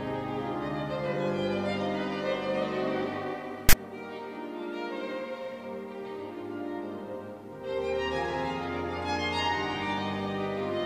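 A hard-edged rasp of static from 3.69 to 3.73 s is file tags played as audio: embedded text metadata decoded as samples, giving a loud, one-sided offset burst.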